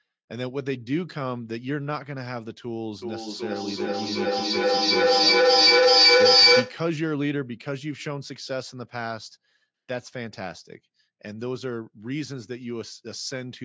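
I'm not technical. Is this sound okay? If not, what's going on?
No. From about 3.0 to 6.9 seconds there is feedback echo between two devices. Two phones or computers in the same room are on the call, and each picks up what the other plays. The sound comes back roughly every 0.4 seconds, and the repeats pile up until they are louder than the speech itself. An ordinary single echo would fade away. Here the repeats build up in a loop.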